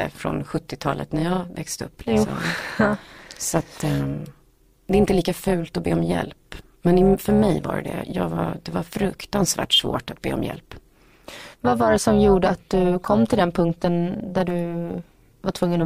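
Speech, processed by a frame-based stage whose windowed frames were overlapped and added back without summing to constant gain, carries overlap-add ripple for its whole length: level swings of about 11 dB repeating around 300 times a second, heard as a metallic buzz with extra tones around the voice.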